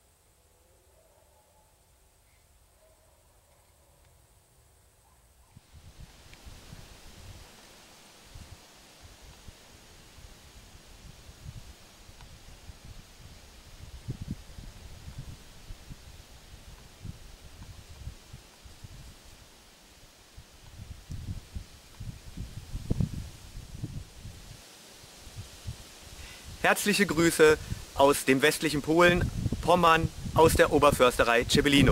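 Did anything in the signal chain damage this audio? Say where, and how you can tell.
No, nothing in the signal chain audibly damaged this audio; the signal holds steady throughout, with no point where a stage along the path has left a mark.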